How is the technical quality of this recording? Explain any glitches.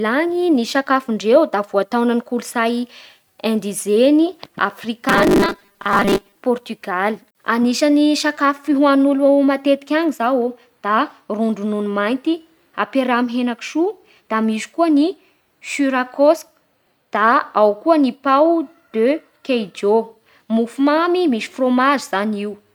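The recording has one glitch. From 5.09 to 6.36 s the speech takes on robotic sound from repeated short buffers: a rigid, metallic buzz near 200 Hz. It is likely caused by audio arriving too late, with the last 5 ms looped to fill gaps, so about half the signal is repeats and the real speech in those gaps is lost.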